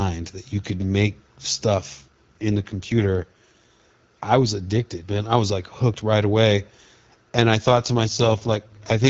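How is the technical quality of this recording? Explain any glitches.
Two stretches suffer an AMR rate drop, heard against the AMR wideband (HD Voice) codec carrying the speech. From 1.93 to 3.80 s and again from 7.68 s to the end, the link forced the codec down to a lower rate, consistent with a fall from 12.65 to 6.6 kbit/s. The speech turns rough and synthetic, with no gap and no loss of bandwidth.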